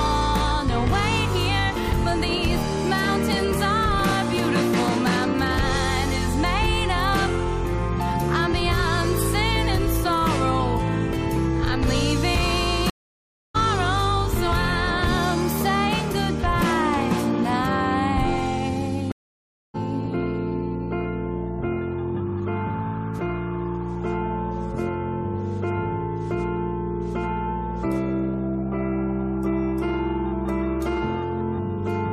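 Stream reconnects at 12.90–13.56 s and 19.12–19.76 s: the connection drops, leaving about 0.6 s of silence, then a fresh decoder resumes roughly half a second and 0.3 s ahead, skipping audio.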